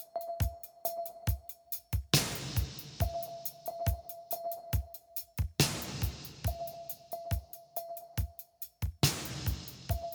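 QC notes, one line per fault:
No faults detected.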